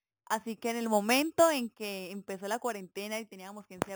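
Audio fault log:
Throughout, imaging from sample-and-hold upsampling: a bright, metallic fizz rides on the speech and rises and falls with it. Each original sample was simply repeated to fill the higher rate, with no smoothing filter. This leaves mirrored copies of the speech spectrum, the lowest spanning 4 kHz to 8 kHz at about 13 dB below the speech. That copy moves opposite to the pitch, which fits a rise from 8 kHz to 44.1 kHz.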